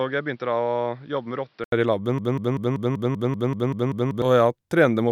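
A speech clip with two distinct faults. From 0.0 to 1.72 s the sound is dull and narrowed, with nothing above 5.7 kHz, about 5 dB quieter, and carrying a noise floor roughly 40 dB below the speech. An 80 ms silence separates it from the fuller sound that follows, which points to the input having likely switched to a poorer device. On a spectrogram this section shows a hard ceiling at 5.7 kHz and a faint steady noise band, then a brief blank gap before energy returns higher up. From 2.18 to 4.22 s a 193 ms fragment plays back to back, eleven times over, a broken-record loop. The player, encoder or stream likely stalled and kept resending its last fragment, and whatever should have sounded in those two seconds is lost. The waveform shows an identical envelope shape stamped out at a fixed 193 ms spacing, and the spectrogram shows the same block of harmonics tiled across the span.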